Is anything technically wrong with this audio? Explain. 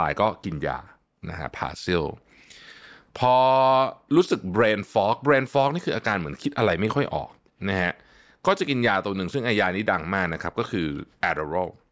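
No, nothing technically wrong stands out in this speech recording; it all sounds just as it should.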